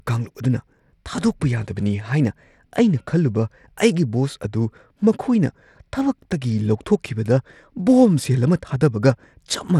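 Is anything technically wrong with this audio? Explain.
Yes. Throughout the speech, the treble flickers and thins, with a gritty grain on the sound, though content still reaches about 20.7 kHz. This is likely Bluetooth SBC compression. Its coarse sub-band quantisation starves the upper bands, which fits a low bitrate near 96 kbps.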